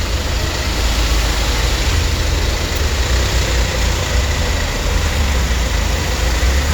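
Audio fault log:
No faults detected.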